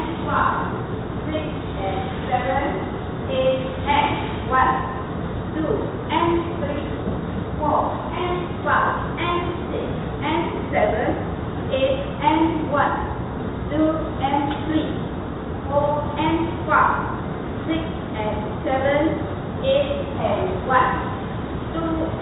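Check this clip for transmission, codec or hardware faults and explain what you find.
No transmission, codec or hardware faults are audible.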